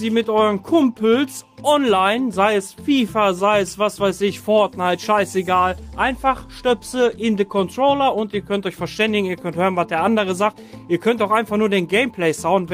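Nothing here catches the ear as a technical fault, so there's nothing to point out at any moment in the clip.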